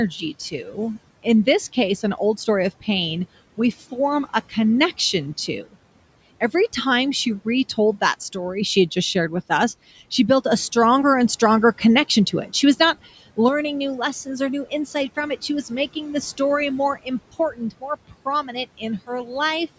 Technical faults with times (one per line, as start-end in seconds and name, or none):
0.33-2.88 speech cut by the noise suppressor
3.57-4.57 speech cut by the noise suppressor
5.13-5.75 speech cut by the noise suppressor
11.41-13.38 speech cut by the noise suppressor
13.49-19.78 one channel drops out
14.25-16.40 speech cut by the noise suppressor
17.03-19.30 speech cut by the noise suppressor